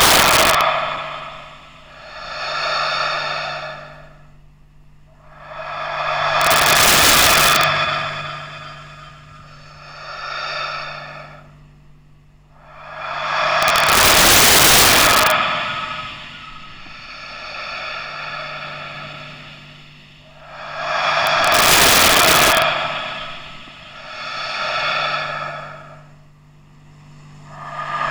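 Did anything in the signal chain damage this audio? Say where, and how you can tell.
Yes, there's integer overflow at the sample-format or gain stage: harsh cracks at 0.01–0.61, 6.41–7.64, 13.63–15.31 and 21.27–22.62 s. Loud peaks pushed about 6 to 9 dB past full scale wrap to the opposite sign instead of clamping, so it's far sharper than clipping.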